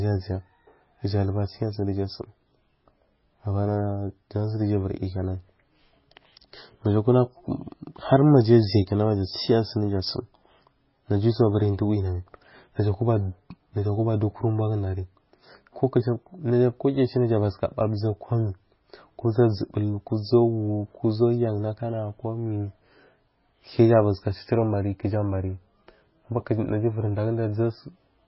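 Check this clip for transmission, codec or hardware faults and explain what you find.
There's one fault, and it runs through the whole clip: heavy MP3 compression, likely. Nothing comes through above 5.6 kHz, so the speech sounds dull and boxed-in, and the s sounds turn watery and swirly with a metallic chirp. When bits are scarce the encoder chops the top end at a fixed point and drops quieter frequency lines that flicker on and off between frames. Damage this heavy points to a very low bitrate, somewhere near 18 kbps.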